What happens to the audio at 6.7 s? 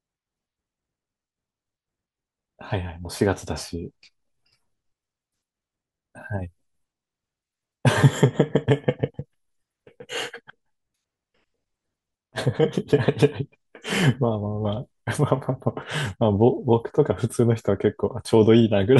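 Nothing goes wrong at 6.7 s; the speech carries straight through that moment with no dropout, click, distortion or other fault.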